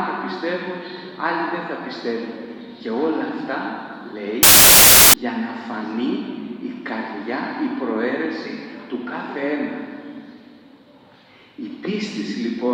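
Loud, harsh broadband noise replaces the sound from 4.43 to 5.14 s. These are samples built from the wrong bytes. Misordered or misaligned bytes push the low bits to the top.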